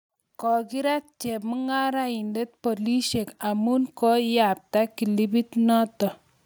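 A speech recording with automatic gain rising throughout. From 0.4 s to 5.96 s, the level climbs steadily by about 12 dB. The voice and the background noise swell together. The gain control judged the input too quiet and kept raising its gain.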